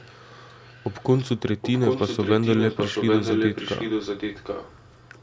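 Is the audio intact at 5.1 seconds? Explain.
No. An echo leak runs from 1.61 s to the end of the clip, so 5.1 s falls inside it. A delayed copy of the speech, trailing by about 0.78 s and only slightly quieter than the original, overlaps the live speech and muddies it. The likely cause is a loudspeaker on one end of the call whose echo canceller failed to strip out what its microphone picked up, so that sound was sent back down the line.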